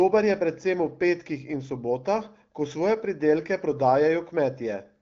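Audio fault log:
No faults detected in this clip.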